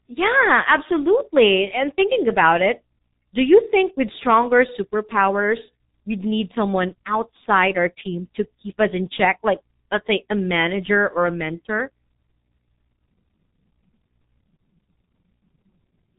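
The speech was squeezed through the G.723.1 codec for its whole length, at a very low rate that fits about 6 kbit/s. The codec's slow voice model and a cut-off at 3.8 kHz leave it muffled and hoarse, with consonants smeared together.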